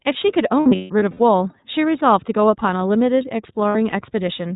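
The whole clip has gone through the iLBC codec, a narrowband VoIP coder that handles each short frame on its own. Here the coding points to 30 ms frames at about 13.3 kbps. Everything above 4 kHz is cut away, so the speech sounds dull and boxed-in. The codec damage is plainly audible as a rough, slightly synthetic texture over the whole voice.

From 0.60 to 1.21 s, lost iLBC frames break up the speech. About 360 ms of audio went missing, spread across 600 ms, and the longest single gap is roughly 150 ms. In each gap the decoder repeats the last pitch cycle mixed with noise, which sounds like a held, buzzy vowel. Because each frame stands alone, clear speech returns right after each gap.

A shorter burst of lost iLBC frames falls between 3.69 and 3.93 s. About 90 ms is missing across 240 ms, with the longest gap near 70 ms. These gaps come out as brief breathy stalls before the speech picks up again.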